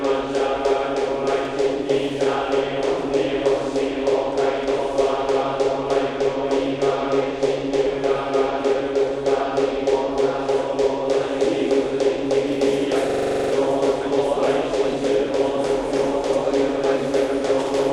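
A recording of sounds that, from 13.10 to 13.53 s, turns into a hard, rattling stutter at about 23 Hz as one 42.67 ms fragment repeats exactly ten times. That is a system hang loop: the system froze while the hardware kept replaying its ring buffer, which fits a 2048-sample buffer, and roughly 0.4 s of audio is lost.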